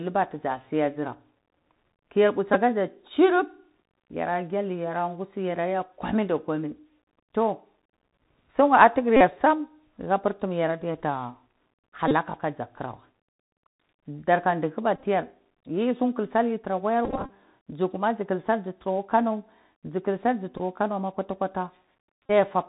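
A scratchy, granular hiss sits under the speech from start to finish, sibilants sound rough, and nothing above 4 kHz comes through. This is the Bluetooth CVSD headset codec, whose one-bit, 64 kHz up-or-down coding cannot keep pace with loud high-frequency sound, so the damage is plainly audible.

Brief buzzy stutters interrupt the speech at 2.54–2.56 s, 9.17–9.21 s, 12.08–12.13 s, 14.96–15.03 s, 17.05–17.30 s, 20.58–20.60 s and 22.26–22.31 s. These are Bluetooth headset packet repeats. Packets were lost and the chip replayed the previous one every 3.75 ms, which produces a buzz near 267 Hz. The worst is at 17 s, where about 146 ms is lost across a quarter second, with the longest run around 30 ms.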